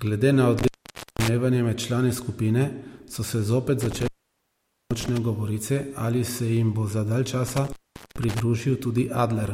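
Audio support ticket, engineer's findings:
Intermittent contact, speech cuts out at 0.58–1.28 s, 3.81–5.18 s and 7.48–8.40 s, opens of about 0.52 s, 0.83 s and 0.43 s. Probable loose cable or plug. Crackle at break and remake, faint hiss while open, unlike clean digital dropouts.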